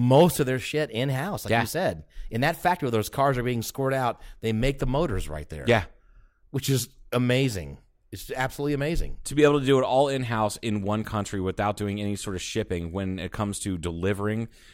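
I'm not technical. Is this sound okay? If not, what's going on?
No. The speech jumps in speed and pitch twice. From 0.72 to 2.93 s, after "of their", it runs about 6% fast and a semitone high. From 6.64 to 7.15 s, before "amazing it's absolutely amazing", it runs about 6% slow and a semitone low. This is likely a drift correction step, where clock-matching software briefly changed the playback rate.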